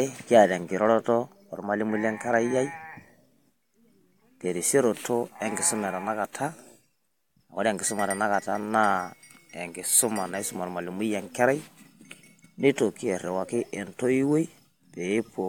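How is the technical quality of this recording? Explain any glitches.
Nothing here sounds like a glitch at all; the speech just rolls along without any technical hiccups worth pointing out.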